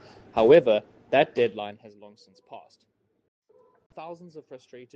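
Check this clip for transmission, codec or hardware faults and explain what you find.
One fault is audible: zipper noise during a level drop.

Zipper noise, 1.38 to 1.98 s: the level falls by about 20 dB over roughly six-tenths of a second, but in coarse unsmoothed steps, something like 70 per second, rather than as a continuous ramp. Each step is an abrupt gain jump that puts a tiny discontinuity into the waveform, so the fade carries a fast ticking, zipping texture on top of the sound until the level settles.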